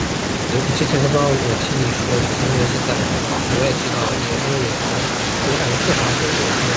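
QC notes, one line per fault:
0.21–0.51 s, speech suppressed in double talk: the speech sinks sharply for about 0.3 s, falling around 35 dB at its deepest before recovering. The likely cause is an echo canceller that heard both sides talking at once, could not tell this talker apart from loudspeaker echo, and clamped the level down while the far end spoke. The call codec cuts off everything above 8 kHz.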